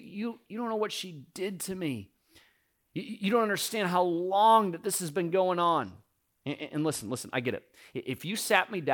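Speech, with a Bluetooth SBC bit pool drop from 5.59 to 7.20 s, between "this has been going" and "I get it". The treble dulls and a gritty quantisation noise rises, which points to the bit pool falling from about 28 to 13, near 102 kbps. The upper sub-bands are starved of bits and the rest are quantised coarsely. Unlike a dropout, the audio keeps flowing without gaps, and it recovers once the link frees up.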